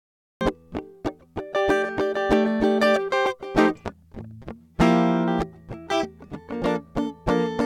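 The music opens with a cut-off start: digital silence from 0 to 0.41 s, then the sound enters abruptly partway through, with no natural attack or fade-in. Capture evidently began late, so the opening of that sound was never recorded.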